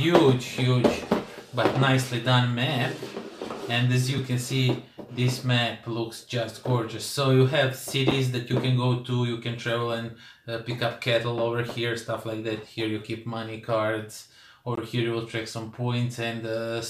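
The audio has two blocks of digital silence. The first comes at 8.11 s and lasts about 5 ms. The second comes at 14.75 s and lasts about 20 ms. In each case the signal drops straight to silence and returns with no fade. The short one sounds like a tick and the longer one like a brief pop or hole. This points to the output buffer not being filled in time, or to an invalid calculation zeroing the samples.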